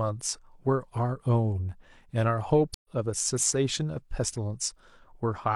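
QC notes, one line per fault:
2.74–2.88 s, stream reconnect: the speech cuts to about 0.10 s of silence, then resumes roughly a tenth of a second further on, so a short stretch of material is simply missing. The connection dropped, the player reconnected and began a fresh decoder mid-stream. Unlike an ordinary dropout or gap, which resumes where the audio left off, this one jumps ahead, and the first sound after the gap enters softly as the new decoder starts up.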